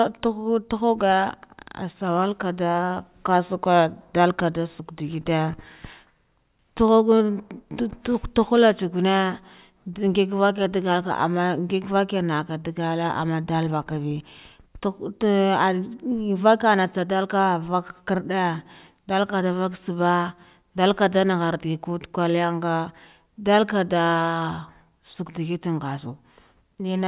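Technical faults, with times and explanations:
No technical faults detected in this speech recording.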